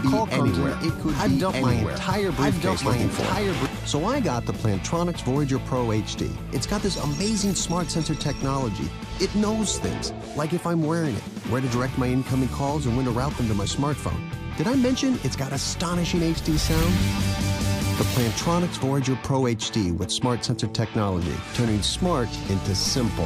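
From the very start until 3.66 s, a doubled audio track is present: a second, full-band copy of the sound runs around a second behind, at roughly the same level, with no decay or room colouring, then cuts off abruptly at 3.66 s. The likely cause is a second capture path or an edit leaving two copies out of step. On a spectrogram, identical patterns repeat about one second apart, and the waveform shows a sudden drop in density where the copy stops.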